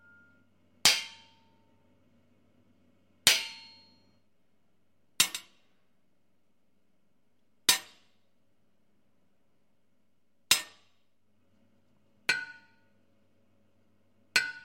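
Nothing goes wrong anywhere in these everyday sounds, with no technical fault turning up at any point along the way.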